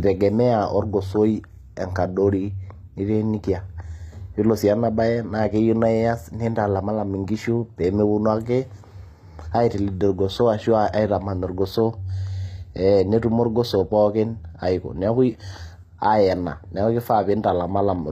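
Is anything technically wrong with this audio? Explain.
Yes. The speech carries plainly audible codec damage throughout, likely from HE-AAC compression. Nothing is present above about 14.9 kHz. The upper range sounds synthetic. This codec codes only the lower spectrum properly. It rebuilds the treble by copying lower bands upward and shaping them with a rough envelope. The copied harmonics do not line up with the real ones. So s sounds come out gritty, metallic or lispy. The damage fits a bitrate around 24 kbps.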